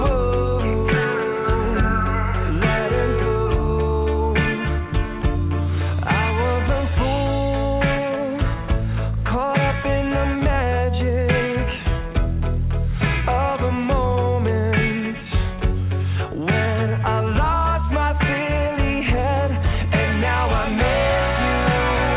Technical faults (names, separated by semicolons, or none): none